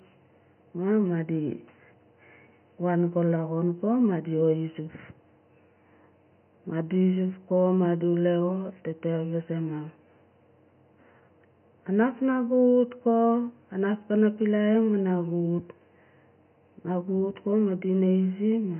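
Nothing stood out on listening to this speech recording, with only faint room noise sitting about 54 dB below the speech.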